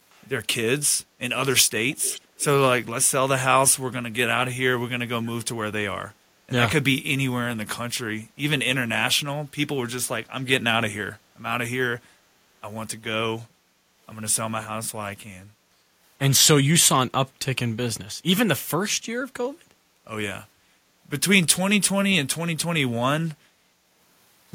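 Faint delayed repeats of the speech surface three times near the start: at 0.11 to 0.28 s very low, about 35 dB under the speech; at 1.90 to 2.21 s more clearly, about 20 dB down; and at 2.39 to 2.45 s, about 25 dB down. Each trails the original by about 440 ms. This is echo leak, likely from a far end on loudspeaker whose echo canceller let part of the returned signal slip back.

Later the room sound briefly sinks and recovers: at 15.71 to 15.89 s by about 6 dB for roughly 150 ms, at 19.59 to 19.93 s by about 7 dB for around 300 ms, and at 23.48 to 23.53 s by about 6 dB for a mere 50 ms or so. This is background gated by the echo canceller, which pulled the microphone down while the loudspeaker was active and released it afterward.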